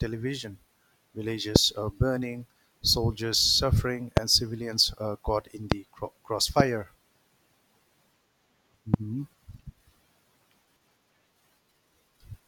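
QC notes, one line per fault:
1.56–1.58, 4.17–4.19, 5.72–5.74, 6.60–6.62, 8.94–8.96 s: loud pop, one sharp pulse each. The first comes just before "uh burning soldiers suffering", the second just before "and civilians uh caught", and the third just after "civilians uh caught in". Each peaks about 25 dB over the speech (the last about 20 dB), a brief voltage spike, likely a switch, static or driver glitch, added while speech continues underneath.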